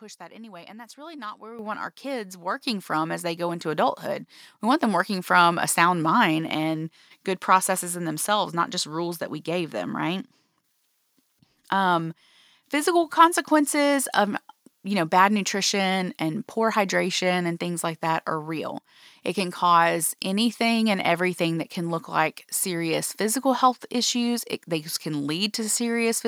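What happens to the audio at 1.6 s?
Microphone volume stepped up at about 1.6 s, between "really not where we" and "want our kids". The call software judged the microphone too quiet and raised its input volume in a single jump of about 10 dB, so the speech and the background noise become louder together, abruptly, mid-sentence.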